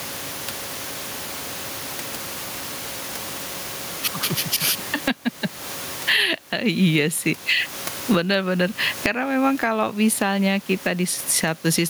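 Speech, with gain pumping throughout. The gain swings by around 20 dB, which squashes the dynamics. The likely cause is mic gain set far too high, with a fast limiter clamping down.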